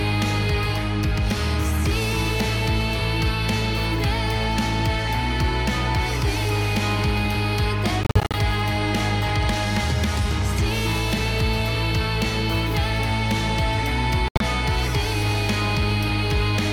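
The audio cuts out in short, hard-edged gaps from 8.03 to 8.35 s and again from 14.28 to 14.41 s, resuming each time as if it had kept playing. These are likely Bluetooth dropouts, with late packets discarded: about 183 ms lost in bursts, and about 107 ms lost with one 76 ms hole.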